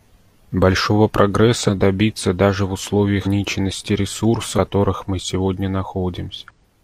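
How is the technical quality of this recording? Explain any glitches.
The recording is marred by four audible dropouts where the speech jumps forward.

Compressed frames skipped at 1.64–1.70 s, 3.22–3.28 s, 4.54–4.59 s and 6.46–6.51 s. Runs of compressed frames never reached playback, so the audio leaps ahead: around seven frames, roughly 300 ms, at the first three points, and around ten, about half a second, at the last. The jumps fit a frame length of about 42.7 ms.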